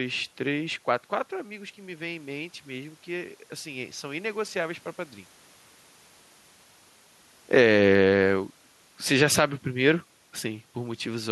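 From 1.45 to 4.5 s, automatic gain rising: the gain control, finding the input about 14 dB quieter after the talker moved away, slowly pushes its gain up by about 5 dB. The voice and the room noise swell together over those three seconds.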